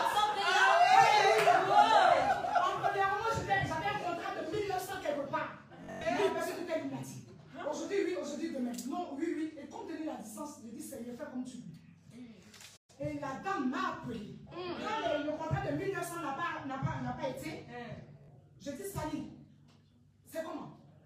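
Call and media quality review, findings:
Bluetooth stutter, 5.84–6.01 s: machine-gun buzz. About 149 ms of audio lost across a 171 ms span, longest run about 107 ms. This fits roughly seven dropped packets, with the receiver replaying its last buffer in place of each one. Audio resumes further on.

Bluetooth stutter, 18.24 s: short double repeat, about 43 ms lost, consistent with two dropped packets. Spectrogram shows the same narrow slice tiled side by side with vertical seams. Waveform shows a repeated identical cycle.

Playback stall, 12.76–12.90 s: output cuts to silence mid-flow for 120 ms, then continues. Likely a buffer underrun or a blocked audio thread on the player side. Waveform: flat line. Spectrogram: clean empty vertical band, hard edges both sides.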